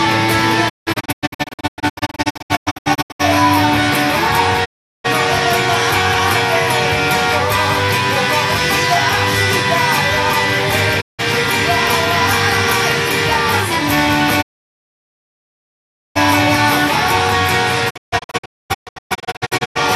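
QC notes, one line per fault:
0.68–3.21 s, digital broadcast dropout: the sound breaks up into scattered muted holes spread over about 2.5 s, adding up to roughly 1.39 s lost, the longest 168 ms. Each hole fades out and back in over 20 ms. The receiver discards frames that fail their checks and mutes rather than play corrupt data. Hole sizes step in multiples of about 24 ms, which fits whole frames being dropped.
4.64–5.06 s, digital broadcast dropout: a single 384 ms mute with 20 ms fades as the signal is briefly lost.
11.00–11.21 s, digital broadcast dropout: a short 168 ms mute, the same frame-dropping behaviour.
14.41–16.17 s, digital broadcast dropout: near-continuous silence of about 1.73 s while reception fails, then the sound resumes further along.
17.89–19.77 s, digital broadcast dropout: a second scattered run over about 1.85 s, roughly 1.2 s lost, longest hole 240 ms.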